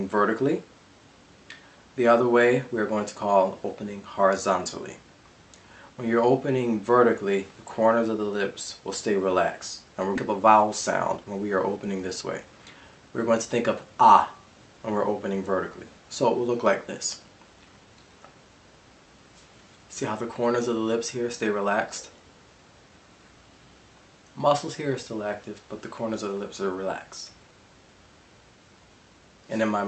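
Around 10.15 to 10.17 s there's a skip ahead. Something like 0.7 s of audio just never gets played, with nothing filling the hole. Playback jumps straight to later material that was already queued, so the two sides butt together almost seamlessly and the delay drops by roughly that much.

Right after, from 10.25 to 10.75 s and again from 11.17 to 13.46 s, you get jitter buffer speed-up. The receiver is trimming tiny pitch-period-sized slices, repeatedly, to drain its backlog, so the sound runs about 10% fast at unchanged pitch and feels a bit hurried. That shaves around 50 ms in the first run and a couple of hundred in the second, all over a call path whose top end stops near 8 kHz.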